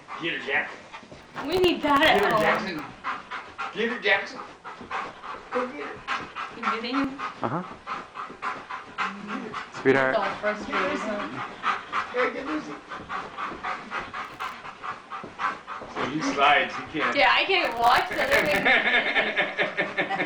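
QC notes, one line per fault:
1.23–2.79 s, 14.25–14.52 s and 17.65–18.63 s: processor overload crackle. In each burst the processor keeps missing its deadlines for very short buffers, which sound under a millisecond long, so it fills the gaps with stale audio that has hard edges. From about twenty to seventy of those tiny misses land again and again, the most in the last one. They blur into a gritty tearing crackle sitting on top of the sound, which clears once the load drops.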